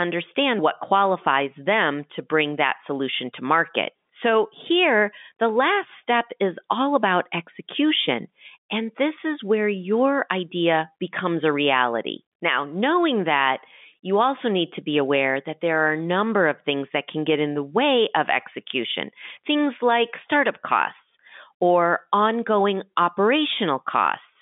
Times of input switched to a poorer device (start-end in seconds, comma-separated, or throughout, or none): none